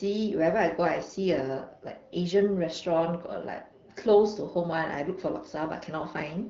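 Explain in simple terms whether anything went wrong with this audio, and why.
Nothing went wrong: the speech is carried by an ordinary AMR wideband (HD Voice) phone link, which by design carries nothing above 7.2 kHz and leaves only the light coding wear that link normally adds.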